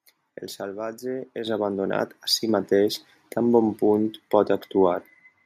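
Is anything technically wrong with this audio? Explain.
Yes. The microphone volume is stepped up twice, at 1.47 s just before "abandonat a si mateix" and at 2.49 s between "abandonat a si" and "mateix tan bon punt". Each time the input gain is raised in a single step, by about 8 dB and then about 4 dB, so speech and background noise jump louder together.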